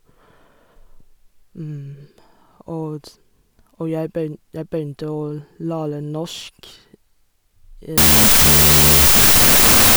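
At 7.98 s the speech collapses into loud, harsh noise that lasts to the end of the clip at 9.97 s, a wrong sample width fault. Data written as 32-bit float are being read as 16-bit integers, so each sample is split into two meaningless values assembled from mismatched bytes. Only the upper halves carry traces of the real signal, leaving a remnant of the speech buried in noise, running at half speed and an octave low.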